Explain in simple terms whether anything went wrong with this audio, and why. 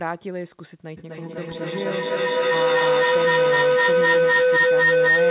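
Two devices on the same call were picking up each other's loudspeakers, so the sound looped round and grew louder each trip. This feedback howl starts at 0.97 s and lasts to the end: a tone near 500 Hz, with the loop coming round about every 0.3 s, louder than the speech.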